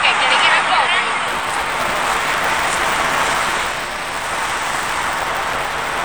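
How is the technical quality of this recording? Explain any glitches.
The recording has buffer tearing from 1.27 s to the end of the clip. The software filling the playback ring buffer and the hardware draining it have drifted out of step, so their positions cross inside every period. About half of each buffer still holds audio from one lap earlier, around 10 ms old, with hard joins on both sides. Those splices repeat at 200 Hz, which points to a buffer period of about 5 ms. The result is a steady robotic buzz riding on the sound, present wherever there is signal.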